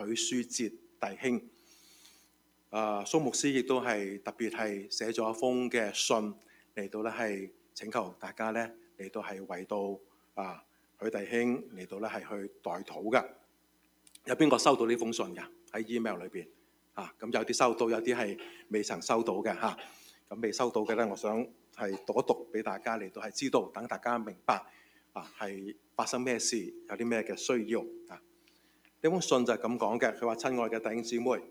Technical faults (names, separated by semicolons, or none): noise suppressor applied to music or sounds; sound cut by the noise suppressor